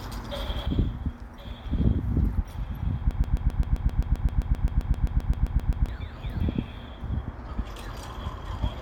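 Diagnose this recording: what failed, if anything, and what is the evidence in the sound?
At 0.66 s the level drops abruptly by about 6 dB and stays down to the end at 8.8 s. This is one channel dropping out, likely a failed analogue connection or cable, so the mono sum now carries only one channel.

From 3.11 s to 5.89 s a 131 ms fragment repeats 21 times back to back, a stuttering broken-record loop, and the audio for that stretch is lost. This is likely a stalled driver or playback buffer resending its last block.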